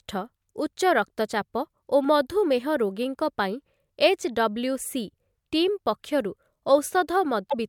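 A speech recording whose MP3 stream likely lost frames near its end, producing a broken MP3 bit reservoir. Frames after the gap reach back for data they had stored in earlier frames, but those bytes now belong to a different frame, so the decoder rebuilds the wrong content. From 7.49 to 7.54 s, about 57 ms or roughly two 26.1 ms frames, the sound jumps ahead and breaks into a brief garbled disturbance before normal decoding resumes.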